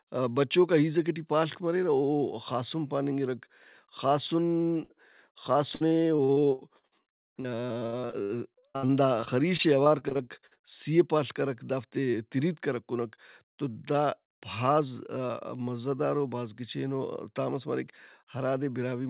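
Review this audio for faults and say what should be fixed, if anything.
Burst of packet loss, 4.84 to 4.91 s: about 60 ms went missing. The receiver continued the last sound and faded it out, and the speech jumps ahead afterward. It is longer than a brief smear.

Short concealed packet loss, 5.33 to 5.37 s: about 20 ms was lost and patched by extrapolation. It is heard as a quick smear.

Repeated packet loss (robotic sound), 5.75 to 10.59 s, ending just before "سِی و پاڷ کرک": 34 gaps, the longest 63 ms, with about 22% of the stretch concealed. Back-to-back patching gives choppy speech with pieces missing rather than one isolated dropout.

The narrowband sound, with nothing above 4 kHz, fits the G.711 mu-law call path.

Prevent these losses by stabilising the network link and enabling packet redundancy or FEC with a slightly deeper jitter buffer.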